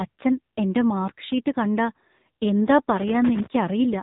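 AMR narrowband mobile codec damage runs through the whole recording. The speech was squeezed through an 8 kHz vocal-tract model, so nothing above 3.8 kHz survives. The heavy buzzy, synthetic quality points to a low rate near 6.7 kbps.

Loose connector crackle breaks in from 2.97 to 3.46 s. A worn or dirty contact was making and breaking rapidly, chopping the signal into an irregular burst of scratchy crackle lasting about half a second.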